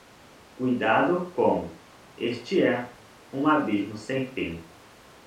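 No technical faults can be heard anywhere in the recording; the speech signal stays continuous and steady throughout.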